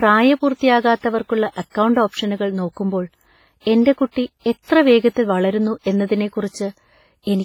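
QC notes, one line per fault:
Throughout: WMA compression. The speech has a heavy ringing, washy quality, with hiss that swells and fades with the signal and weak detail dropped out. This is likely a simple transform encoder at a low bitrate, which fits around 24 kbps, quantising coarsely.
1.70–1.75 s, 4.11–4.16 s, 5.81–5.86 s: pre-echo. About 50 ms of hiss arrives just before each sharp attack, softening and smearing it. The codec spread noise sized for the loud onset across its whole block, so it filled the quiet moment beforehand.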